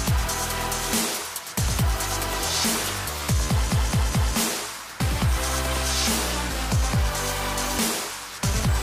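Nothing is technically wrong with this clip.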